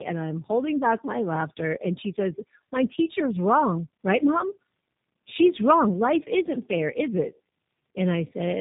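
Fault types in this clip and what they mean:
Tandem speech coding: rough, muffled, warbly speech with nothing above about 3.8 kHz, from two low-rate codecs in a row, AMR-NB then G.729A.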